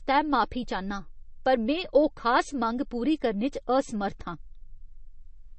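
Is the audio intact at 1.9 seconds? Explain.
No. At 1.9 seconds, as throughout, the speech carries likely MP3 compression. Nothing survives above 8.3 kHz, and weak frequency lines flicker between frames, giving a watery, swirly texture that fits a low bitrate near 32 kbps. That flicker sets it apart from a simple low-pass filter.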